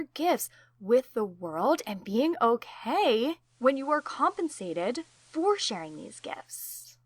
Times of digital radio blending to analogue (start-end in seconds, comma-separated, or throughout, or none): 3.40-6.66